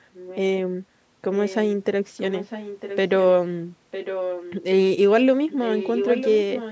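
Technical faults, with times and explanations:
0.13–0.4 s, 1.36–1.56 s, 2.17–2.97 s, 3.91–4.54 s and 5.47 s to the end: echo leak. A delayed copy of the speech returns 954 ms late, growing from faint to about 10 dB below the speech. It is a distinct repeat, not a smooth room tail. The likely cause is a loudspeaker's sound getting past an echo canceller.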